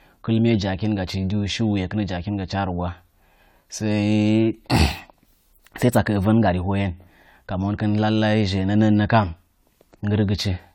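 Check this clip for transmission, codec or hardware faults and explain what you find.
There's one fault here, and it runs through the whole clip: generation loss. The speech sounds swirly, smeared and hollow, with blurred attacks, and nothing reaches above 19.9 kHz. That likely comes from about five lossy re-encodes, each requantising on a shifted frame grid, consistent with AAC-LC around 96 kbit/s.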